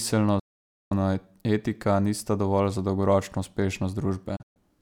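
At 0.39 s the speech cuts to silence through a digital broadcast dropout: the receiver stops getting valid frames and mutes, with an 8 ms fade, until 0.92 s. That gap of about half a second fits a run of lost frames of roughly 32 ms each. A second dropout from 4.36 to 4.60 s breaks into short holes, the longest 128 ms. On a waveform these appear as flat silent stretches, and on a spectrogram as blank vertical bands.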